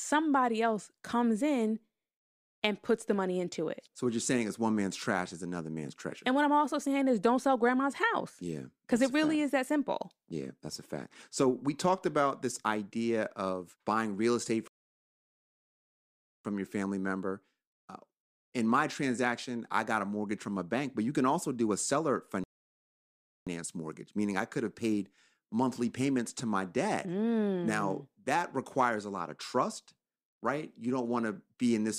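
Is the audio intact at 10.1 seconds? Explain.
Yes, at 10.1 seconds the speech plays through cleanly, with no dropout, click, distortion or other fault at that moment.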